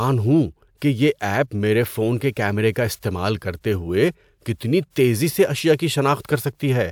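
No technical faults can be heard anywhere in the speech.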